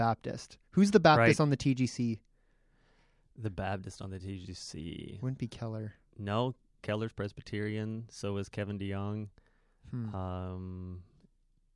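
Nothing technically wrong turns up anywhere in this short bit of speech, so there's no problem to point to and no cause to chase.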